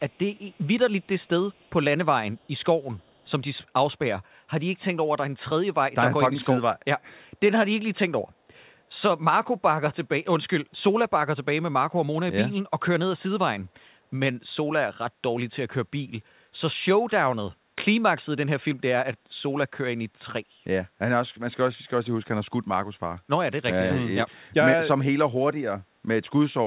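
Faint echo leak at 0.10, 0.36, 1.02, 1.50, 2.37 and 2.81 s: a delayed copy of the speech about 284 ms late, likely from incomplete far-end echo cancellation, loudest near 1.50 s, over band-limited telephone-quality audio.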